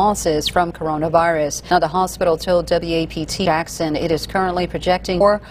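At 3.45 s and again at 5.2 s the sound jumps forward abruptly, with no gap of silence, as if about a third of a second has been cut out each time. That's the signature of audio missing between chunks: the likely cause is a recorder working in 2-second blocks that drops a piece while switching from one block to the next, then butts the two edges straight together.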